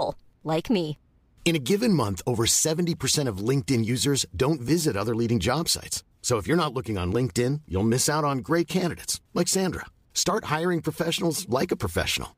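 No technical fault can be heard anywhere in the speech, and the signal holds steady throughout.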